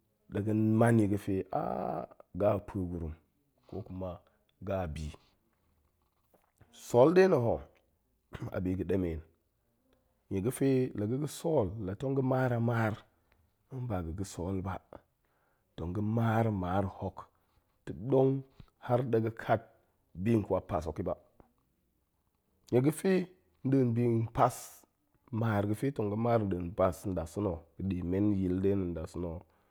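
Nothing in the speech recording stood out as a technical problem on listening.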